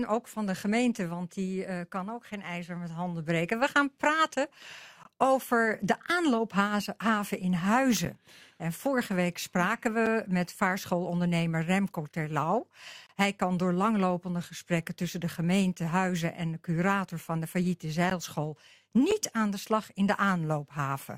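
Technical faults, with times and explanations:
5.03, 8.05, 10.06, 13.07 to 13.09, 18.10 and 19.11 s, gap between stream segments: hard-edged silent holes of about 6 to 28 ms fall on one-second segment boundaries, where mismatched timestamps leave spacing that the player fills with silence, briefly interrupting the sound without losing any.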